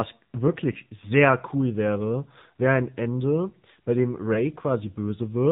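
Throughout, the speech carries AMR narrowband mobile codec damage: nothing passes above 4 kHz, so a spectrogram shows a flat ceiling there, and the pulse-driven vocal tract model makes the voice plainly buzzy and synthetic, which fits a low AMR-NB mode around 7.4 kbps.

Lost AMR speech frames occur at 0.72 to 0.76 s, just before "sehr cool wäre wäre", and at 4.34 to 4.44 s, just after "bei dem". Each fits a single lost 20 ms frame: the decoder repeats the previous pitch and vocal tract settings at falling gain, giving a brief dip or warble. The waveform shows a short amplitude sag there, and the spectrogram shows smeared, repeated harmonics.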